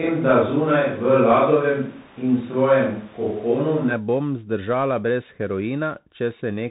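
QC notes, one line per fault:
Throughout: Bluetooth CVSD headset codec. Everything is cut off around 3.8 kHz, so speech sounds narrow and phone-like. The one-bit up/down coding can't keep up with sharp sounds, so s sounds get scratchy over a grainy hiss, which fits a 64 kbps CVSD link.
0.0 to 3.92 s: switch to a distant microphone. Already under way when the clip starts, the speech sounds roomy and hollow, with thinner bass and background noise about 30 dB below it. That points to a far-off mic, likely after the close one dropped out. Level barely shifts, then the close sound snaps back just before "bom zdržala brez".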